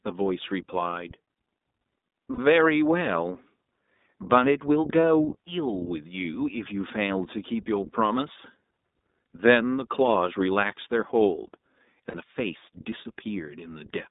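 Right from the start the speech has that narrowband iLBC codec sound. Everything sits roughly between 200 Hz and 3.7 kHz, so it's thin and boxy, and there's a plainly audible rough, slightly synthetic edge to it. That comes from each short frame's excitation being coded on its own at a low rate. The 20 ms framing points to the 15.2 kbps mode. Then there are three spots of lost iLBC frames. The first runs from 2.34 to 2.39 s, about 40 ms of missing audio. The second is a brief hit at 5.03 s, a single 20 ms frame. The third runs from 12.10 to 12.16 s, again about 40 ms. In each gap the decoder papers over the hole by repeating the last pitch cycle with some noise mixed in. You hear a short held, buzzy, breathy vowel-like smear instead of a dropout. Since iLBC frames don't depend on their neighbours, the speech snaps back cleanly right after each one.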